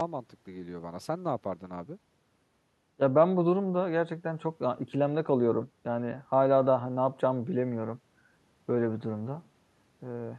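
Nothing in this bit of speech trips any alarms, as there's no technical fault to point to anywhere along the way.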